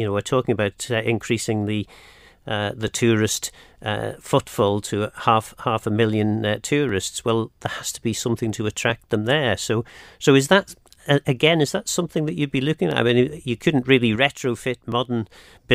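A speech recording with overlapping chunks: every 2 seconds you get a tiny stutter or click, at 0.87, 2.88, 4.89, 6.89, 8.90, 10.91, 12.91 and 14.92 s. The audio was cut into 2-second blocks, and each new block starts about 7 ms before the previous one finished, so that sliver of sound plays twice at every join. The doubled fragment breaks the waveform's continuity, which is where the click comes from.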